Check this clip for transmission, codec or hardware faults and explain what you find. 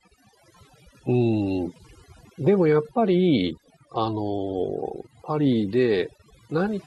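The clip shows one processing fault, present throughout: overdone noise removal. Gaps between phrases fall to near silence with twinkling specks. A noise reducer set too hard is muting individual frequency bands near its noise estimate, taking quiet parts of the voice along.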